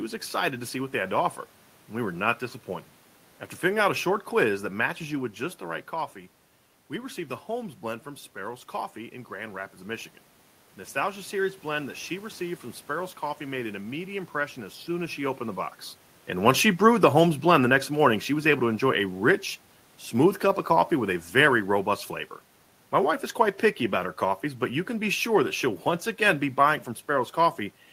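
From 16.33 s to 21.69 s, automatic gain falling: the gain control judged the input too loud or its background noise too strong and eased its gain down by about 6 dB. Speech and room noise sink together, so the waveform envelope tapers and the spectrogram dims evenly across all frequencies.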